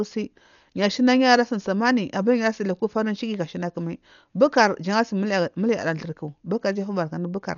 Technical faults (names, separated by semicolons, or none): Dolby Digital compression